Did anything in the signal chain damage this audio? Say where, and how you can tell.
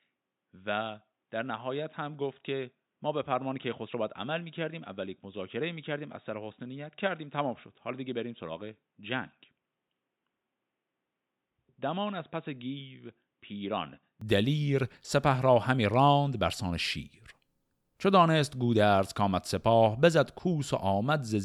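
Yes. Until 14.21 s the speech is dull and boxy, with nothing above 3.8 kHz, about 10 dB quieter, and over a faint separate noise floor. A spectrogram shows a flat ceiling that lifts abruptly with no gap, where the waveform steps up. This is likely an input switched to a poorer device, at the driver stage.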